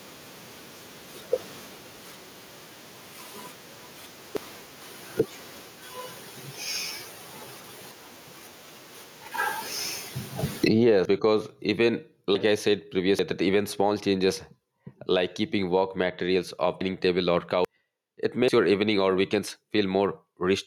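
Throughout, the gain swings about 50 dB. This is gain pumping, likely from excessive gain clamped by a fast limiter.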